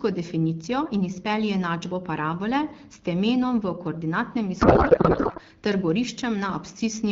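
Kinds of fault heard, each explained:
Codec payload misread: from 4.61 to 5.40 s, just after "s temenom v koordinatnem", the AMR-WB speech, clear at what sounds like 12.65 kbit/s, gives way to garbled noise and warble barely tracking it. Octet-aligned frames read as bandwidth-efficient shift every field, unlike packet loss, which leaves silence or smooth concealment.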